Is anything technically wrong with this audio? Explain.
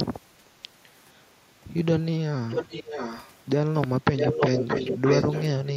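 Yes. Throughout the clip, computer activity noise is present: shifting load in the processor, graphics card or mouse disturbs the ground shared with the audio circuit. This leaves a faint buzz pulsing at roughly 300 times a second, sitting far below the speech.

From 2.5 to 3.31 s and again from 4.17 to 5.44 s, a copy of the speech returns 624 ms late. This is likely an echo leak, where a far end on loudspeaker fails to cancel its own pickup and sends it back. The first return is somewhat quieter than the speech; the second is about equally loud.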